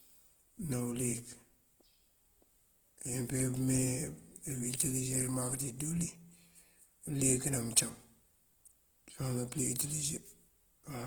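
Speech, rough and grainy throughout, with tonal parts turned noisy, yet still extending to 20.1 kHz; likely Opus compression in CELT mode, which fits a bitrate near 16 kbps.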